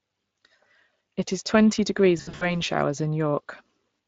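From the start, the Speex codec leaves a plainly audible hoarse, noisy texture on the speech. This CELP coder rebuilds the voice from a pitch predictor and a coarsely quantised excitation, and the degree of damage fits a setting of around 20 kbps.

From 2.17 to 2.57 s, VoIP packet loss concealed by the speech codec takes over. About 180 ms of audio is missing, scattered over 240 ms with runs of up to 60 ms, which fits roughly nine lost 20 ms frames. The decoder extends its last pitch and filter into buzzy, fading fragments, and the speech stays weak and smeared briefly after packets resume.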